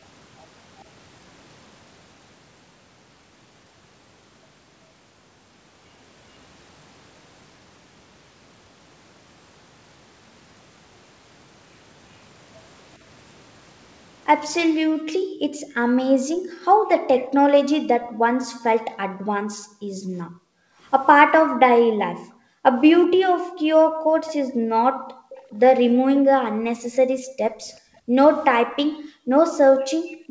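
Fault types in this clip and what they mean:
Background gated by the echo canceller: The echo canceller treated incoming far-end sound as a reason to pull the microphone down hard. Here the room background sinks by up to about 40 dB. It first drops between 14.75 and 20.79 s, muted for around five seconds of that stretch. It drops again from 21.41 s to the end of the clip. It sounds like the room dipping or dropping out.
Echo leak: Faint delayed copies of the speech return about 390 ms after the original, sitting well below the main speech. They appear as short scraps at 17.16–17.26 s, 24.27–24.33 s and 25.30–25.55 s. The likely cause is a loudspeaker on the other end whose echo canceller failed to remove everything its microphone caught, so a remnant travelled back down the call.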